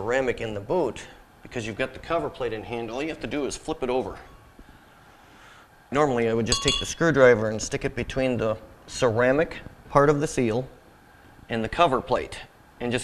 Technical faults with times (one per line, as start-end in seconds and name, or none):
7.72 dropped buffer (overrun)